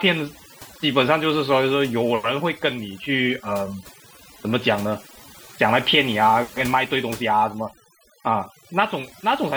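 Across the whole speech clip the background drops and breaks up into twinkling specks: overdone noise removal, where aggressive reduction switched off individual frequency bands near the noise estimate, taking quiet voice detail too.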